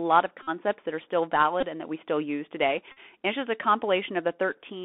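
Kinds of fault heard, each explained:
Bluetooth CVSD headset codec: The headset link carries the speech as one-bit up-or-down steps at 64 kHz with an adapting step size. Everything sits inside roughly 200 Hz to 3.5 kHz, with plainly audible granular roughness and strained, grainy loud high sounds throughout.
Bluetooth headset packet repeated: Voice packets dropped between headset and phone, and the chip replayed the last good packet every 3.75 ms. This gives a brief buzz near 267 Hz at 0.43 s before "that are still" (45 ms), 1.61 s after it (19 ms), and 2.92 s after "we still use today" (49 ms).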